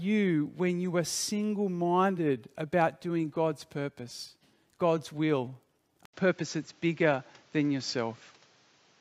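Speech, with an abrupt change of character at 6.05 s that lasts to the end. After an 80 ms silence, the band stops at about 7.6 kHz, the level shifts by around 5 dB, and a different background hiss appears roughly 35 dB under the signal. The likely cause is the input switched to a poorer device. A filter or EQ change alone would not bring the gap, the new noise floor, or the level jump all at once.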